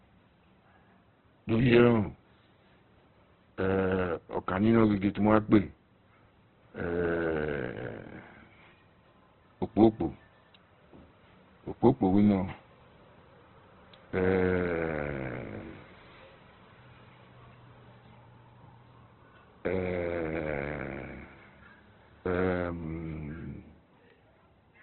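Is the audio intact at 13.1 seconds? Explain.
No. At 13.1 s, as across the whole clip, the speech is cut off above about 4.1 kHz and sounds grainy and rough, likely Opus compression at a low bitrate near 12 kbps, where the encoder fills starved bands with noise. That graininess, with less swirling than MP3, marks it apart.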